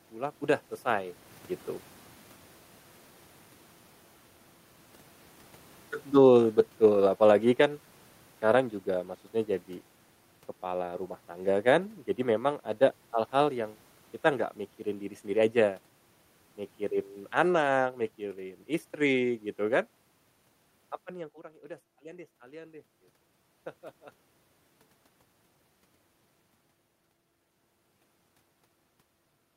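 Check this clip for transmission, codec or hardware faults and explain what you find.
The fault here is automatic gain falling, heard twice in the speech. From 6.02 to 8.69 s the level sinks by about 6 dB. From 10.66 to 15.88 s it drops again, by about 4 dB. The gain control judged the input too loud or its background noise too strong, and pulled its gain down slowly. The room noise sinks together with the voice, and that marks it as a gain change. The talker's movements near 1 s and 21 s are different: there the voice changes level while the room noise does not.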